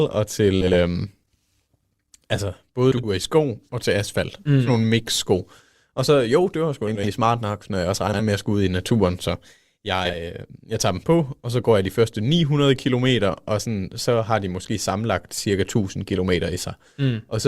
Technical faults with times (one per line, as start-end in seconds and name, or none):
0.61-0.74 frames out of order
2.91-3.08 frames out of order
6.87-7.09 frames out of order
8.07-8.22 frames out of order
10.05-10.18 frames out of order